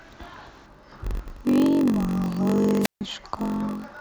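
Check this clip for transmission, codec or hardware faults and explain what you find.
Two faults are audible: a block size mismatch running through the whole speech clip, and a wireless microphone squelch dropout near its end.

Throughout, there is a block size mismatch (padded). Each block written is shorter than the 1024 samples the next stage reads, so the shortfall is filled with zeros. A 46.9 Hz buzz rides under the speech, and delivery is slowed to 0.938 times normal speed at roughly the original pitch, which fits blocks of about 960 samples. On a waveform, short flat gaps repeat every block. On a spectrogram, this shows as faint vertical stripes and a harmonic comb above 46.9 Hz.

From 2.81 to 3.01 s, there is a wireless microphone squelch dropout. The FM radio link fades, and hiss or static rises briefly. The receiver's squelch then cuts the output for about 142 ms before the speech returns. 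On a waveform, this appears as a short burst of broadband noise followed by a near-flat line. On a spectrogram, a smeared noise band gives way to a dark, empty column.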